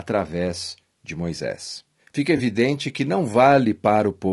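Low-delay AAC compression runs through the whole clip: the speech sounds rough and grainy, with noise between harmonics, likely from AAC-ELD coding at a low rate near 32 kbps.

AAC frame loss with concealment appears from 2.37 to 2.41 s, just before "que não": a brief smeared, noisy patch where the decoder filled in one lost frame, about 20 ms.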